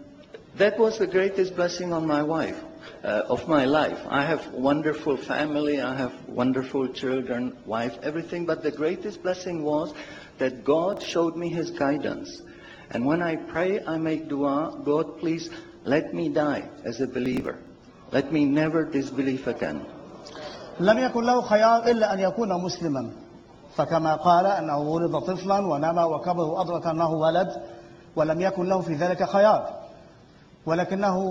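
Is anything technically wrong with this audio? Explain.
Yes. Processor overload crackle occurs from 10.93 to 11.11 s and again from 17.26 to 17.68 s. The processor repeatedly misses buffer deadlines, and each buffer of a few milliseconds is skipped. The result is a rapid burst of hard-edged gaps that sounds like gritty tearing. Unlike a single dropout, it is many tiny breaks clustered together, and it stops once the load eases.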